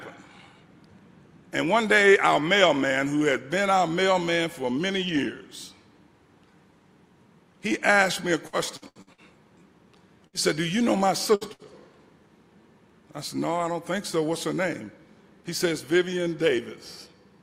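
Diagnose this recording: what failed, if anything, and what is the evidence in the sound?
The network path is the culprit. From 8.47 to 9.21 s there's repeated packet loss, the robotic, choppy stretch. Five separate holes land in under a second, the longest about 77 ms, and roughly 39% of that span is patched rather than real. Each gap gets filled by stretching the last bit of sound, then the next gap hits before things recover, so it comes out chopped, with about 240 ms of material simply gone.

Right after that come three short bursts of packet loss, at 10.27–10.36 s, 11.35–11.44 s and 11.53–11.62 s. Each is a single dropout of about 60 ms where the receiver keeps the previous sound going and fades it down, so you hear a brief held buzz or fading hiss instead of what should be there. Playback then picks up further along, and about 60 ms of real audio is lost each time.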